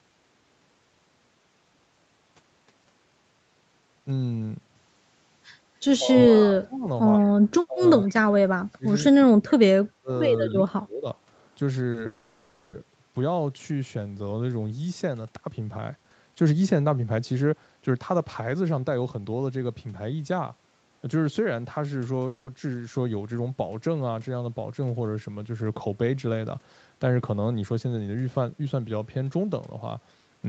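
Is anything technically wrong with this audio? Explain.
Yes. Several call-transport and echo-control faults affect this speech, mainly in the first half.

From 5.99 to 11.07 s the speech is suppressed in double talk, most likely because the echo canceller could not tell the near talker from loudspeaker echo while both sides spoke and pulled the level down. Five stretches are hit: 5.99–6.86, 7.66–7.82, 8.02–8.85, 9.11–10.1 and 10.54–11.07 s. The voice sinks by about 20 to 35 dB, deepest in the third and fourth, and parts nearly vanish.

At 10.5 s there is an echo leak, likely from a loudspeaker whose canceller let some of its microphone pickup through. A faint copy of the voice returns about 146 ms late, at roughly 25 dB below the speech, as a brief scrap just before the last suppressed stretch.

A short stall from a late packet occurs at 11.91–11.97 s. A packet missed its playout time, the jitter buffer ran dry, and the receiver held the last sound for about 30 ms until it arrived. 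Nothing is lost, but one sound is briefly drawn out with a slight buzz or dip.

Call audio freezes follow at 12.06–12.76 s and 22.27–22.50 s, likely from packets held up in transit that emptied the jitter buffer. The receiver filled the gaps by continuing the last sound, for about 670 ms and then 200 ms, as a fading buzz or hiss rather than silence. Playback resumes where it stopped, so the speech is interrupted, not cut.

Jitter buffer speed-up runs from 15.44 to 19.69 s and again from 27.2 to 28.73 s. The buffer held more audio than its target, so the receiver repeatedly cut short pitch-period pieces to shed delay, about half a second and then a fifth of a second in total. The speech plays at 112% speed with unchanged pitch and sounds hurried.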